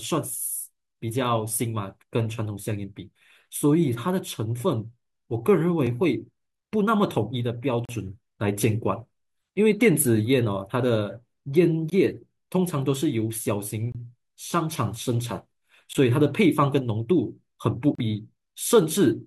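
Gaps between stream segments cut the speech at 5.87, 7.85 to 7.89, 11.90, 13.92 to 13.95, 15.93 and 17.95 to 17.99 s. Segment timestamps leave holes that are filled with silence. Each is a hard-edged dropout of 3 to 36 ms. They recur about every 2 seconds.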